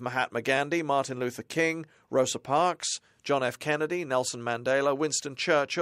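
No technical faults can be heard in the speech recording, which keeps a steady, continuous signal with no dropouts, clipping or distortion at any point.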